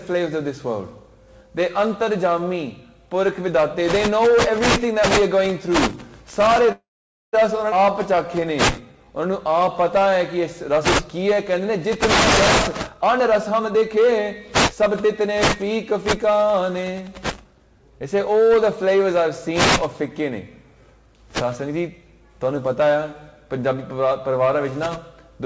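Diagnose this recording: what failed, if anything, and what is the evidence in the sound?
From 6.72 to 7.35 s the audio stops and is bridged by a 0.61 s fill that fades to silence for the last 0.5 s, then resumes where it left off with nothing lost. This is a call audio freeze at the network and jitter-buffer stage, likely from delayed packets.

At 7.71 to 7.74 s playback jumps forward. Only a 7 ms join covers the cut, and about a fifth of a second of audio is gone. This is a skip ahead at the network and jitter-buffer stage: a stretch was dropped while later packets were already waiting, and the two sides were spliced almost directly.

From 7.86 to 10.74 s the audio runs at 93% speed without a change in pitch, stretched by 203 ms in total. A second stretch from 11.18 to 11.52 s runs at 91%, adding 36 ms. This is a jitter buffer slow-down: the receiver repeated pitch periods to rebuild its reserve.

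From 12.89 to 17.67 s the audio plays at 113% speed with pitch unchanged, and around 0.7 s is trimmed away, so it sounds hurried. This is a jitter buffer speed-up: the receiver cut short pieces of pitch periods to shed excess delay, all over a G.722 call path with nothing above 8 kHz.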